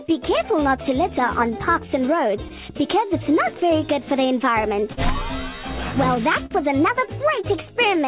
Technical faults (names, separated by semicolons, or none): clock drift between sender and receiver; scattered short gaps; repeated timing corrections; short stall from a late packet